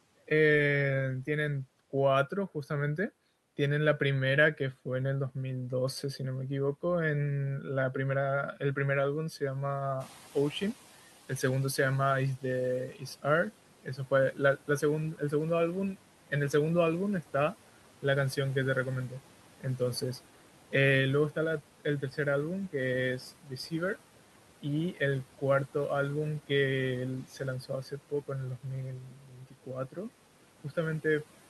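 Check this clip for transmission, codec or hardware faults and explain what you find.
The faults come from a noise suppressor, not from transmission, the codec or hardware. Three kinds can be heard.

Noise suppressor artifacts run through the whole clip. Bands judged to be steady noise are cut by about 12 dB each frame.

Noise suppressor catching up occurs from 10.0 to 11.05 s. The room noise jumps by about 12 dB at 10.0 s. The suppressor's estimate takes 1.05 s to adapt, so the noise comes through with less reduction at first, then sinks by about 10 dB.

Speech cut by the noise suppressor occurs at 12.37 to 13.24 s, 13.83 to 15.32 s, 19.1 to 20.02 s, 21.35 to 22.18 s, 23.43 to 23.97 s, 24.62 to 25.42 s and 27.24 to 29.98 s. The suppressor mistakes quiet speech for noise and lowers it by about 9 to 13 dB. Only brief parts of each span are hit. The last span loses the most, under a second in all. 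Those parts sound swallowed or faint.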